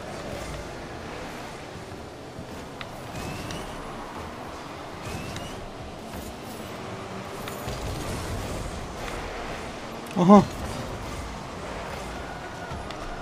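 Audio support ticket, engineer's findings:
Short blip at 9.91–9.95 s, roughly 30 ms, peaking around -25 dBFS. Looks like a corrupt frame decoded: one compressed frame with flipped bits got played instead of concealed, so misread gains or codes dumped energy in the wrong bands for a single frame's length. Probable component is the decoder or the transport feeding it. Worth checking error detection and concealment there.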